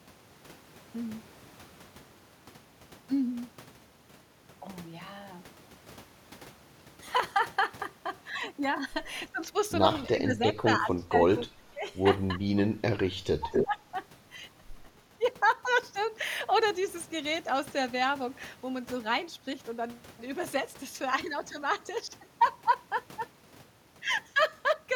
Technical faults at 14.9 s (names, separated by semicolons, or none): echo leak